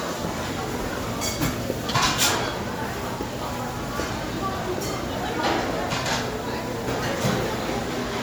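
Generation loss runs through the whole recording: the sound is swirly, smeared and hollow, and transients arrive blurred. It was likely re-encoded about three times with MP3, at a rate that points to 96 kbit/s, each pass requantising on a fresh frame grid so the damage stacks. A spectrogram shows flickering holes and speckled noise across the bands, with nothing above 20.1 kHz, while the waveform's sharp onsets look softened and pre-smeared.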